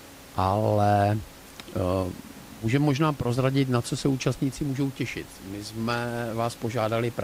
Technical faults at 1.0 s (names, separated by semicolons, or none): none